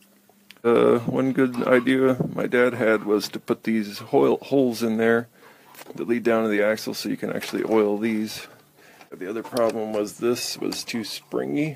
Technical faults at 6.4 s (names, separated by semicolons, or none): none